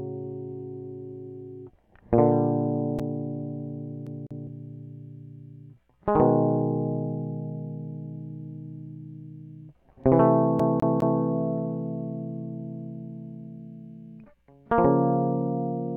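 At 4.06 s the music catches in a CD stuck on one turn. A damaged spot makes the laser jump back a track each rotation, so a 0.2 s slice plays twice until 4.47 s, then three times from 10.60 s to 11.21 s, each jump marked by a brief mute. It sounds like a quick, even stutter. A waveform shows identical 0.2 s blocks separated by thin gaps, and a spectrogram shows the same pattern repeating like tiles, with narrow vertical breaks between them.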